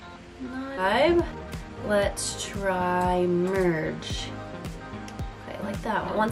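A skip ahead at 0.77 to 0.79 s makes playback lurch forward with no filler, so about a second of audio is simply missing and the two sides are butted together. That stretch was dropped, on the way or by the buffer, while later audio was already waiting. A jitter buffer speed-up follows from 1.02 to 3.36 s. The receiver, holding more audio than it wanted, repeatedly cut out pitch-period-sized slices, running the sound at about 115 % speed with unchanged pitch and trimming about 0.4 s overall, so this passage sounds hurried.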